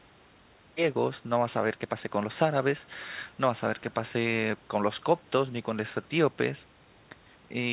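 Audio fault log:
No technical faults detected.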